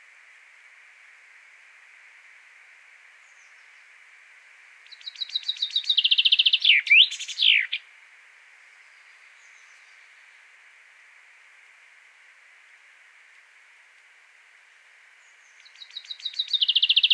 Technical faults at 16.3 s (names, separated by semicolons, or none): none